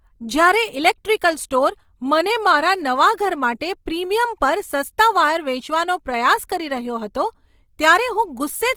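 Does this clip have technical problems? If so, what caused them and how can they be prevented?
Yes. Opus compression throughout: the speech keeps content up to about 20.3 kHz yet sounds plainly grainy and rough, because the codec's CELT mode fills starved bands with folded or noise content, which points to likely Opus encoding at around 24 kbps. A higher bitrate or an uncompressed source prevents it.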